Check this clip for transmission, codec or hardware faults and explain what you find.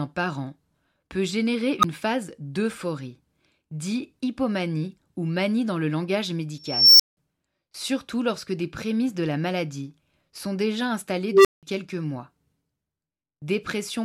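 Three bursts in this speech clip come from an unstable filter. Each is a tone that swells to clipping and then drops into silence, caused by a recursive filter with bad coefficients whose output runs away and overflows until it resets.

At 1.79 to 1.84 s a squeal of around 1.5 kHz builds in 41 ms, followed by 10 ms of silence.

At 6.64 to 7.17 s a whine of around 5 kHz climbs over 354 ms, then cuts out for 175 ms.

At 11.30 to 11.63 s a low tone of around 400 Hz grows for 152 ms, followed by 180 ms of silence.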